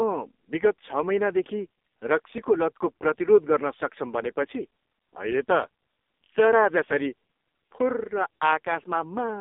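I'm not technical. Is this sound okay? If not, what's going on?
No. Throughout, the speech has AMR narrowband mobile codec damage: it sounds like a poor phone call, muffled above about 3.7 kHz, and buzzy and robotic rather than merely dull.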